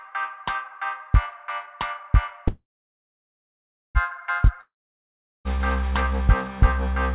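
At 2.48 s a call audio freeze begins. The last sound is drawn out as a brief fading buzz, then about 1.32 s of near-silence, until the audio resumes at 3.98 s. The likely cause is packets held up in transit so the jitter buffer ran dry. What sets this apart from a dropout is that playback picks up exactly where it stopped. Nothing is skipped, and everything after it simply runs about 1.47 s later than before.

From 4.61 s to 5.60 s there is a long network dropout. It opens with the same fading buzz, followed by roughly 0.76 s of silence. This time about 0.84 s of audio was likely never delivered, so when sound returns it jumps ahead past the lost part instead of continuing seamlessly. The missing section, not the pause itself, is what separates it from the freeze. Throughout the clip, the G.711 call path leaves nothing above 4 kHz.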